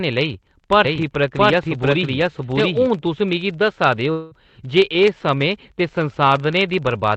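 A filter restarted on every block runs through the whole speech clip. The filter drops its memory at each block boundary and starts from silence. Each restart leaves a small click. Together they form a buzz near 23.4 Hz, which fits a 2048-sample block. It rises and falls with the speech level.

From 0.85 to 2.87 s there is a doubled audio track. A second copy of the speech runs about 0.7 s behind the first, at roughly the same loudness. It has no room colour or decay. It starts and stops abruptly, likely because the audio was captured twice by a slower path.

From 4.11 to 4.34 s, right after "मिगी दस्सा दे", there is a long network dropout. About 200 ms of audio never arrived. The receiver filled the gap by stretching the last sound into a fading buzz or hiss for about 0.2 s. Speech then resumes with that part missing, likely lost in transit. The call codec keeps the band below 8 kHz.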